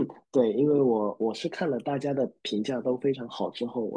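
A short speech recording with no technical faults to report, its signal holding steady and intact all the way through.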